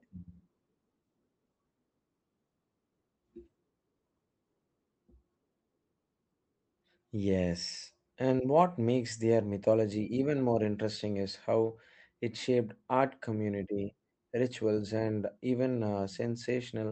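Nothing stood out on listening to this speech clip, which came through an ordinary call connection.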